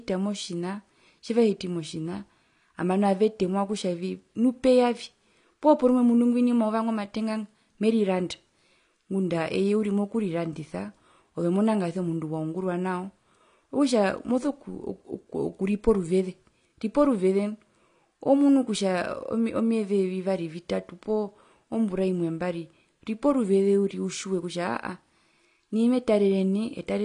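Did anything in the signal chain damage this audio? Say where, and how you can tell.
Yes, at the codec stage: AAC compression runs the whole way through, nothing above 10 kHz, with smeared, fizzy sibilants, likely a low-bitrate AAC-LC encode, around 32 kbps.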